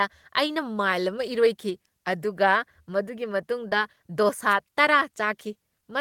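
At 3.69 to 3.73 s, just after "ꯑꯃ ꯏꯔꯣꯏꯈꯤ ꯑꯗꯨꯒ ꯃꯗꯨꯒꯤ", there is a short concealed packet loss: about 20 ms of audio arrived too late, and the receiver extrapolated 16 ms from the preceding sound before blending back. It is heard as a brief smear.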